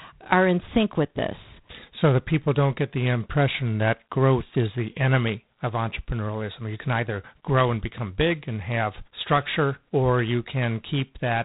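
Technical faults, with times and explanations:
Throughout, G.726 ADPCM: the speech carries a harsh, rasping hiss that swells and fades with its level, and nothing passes above 3.9 kHz. Too few bits code each sample's error from the adaptive prediction, and the roughness fits 24 kbit/s.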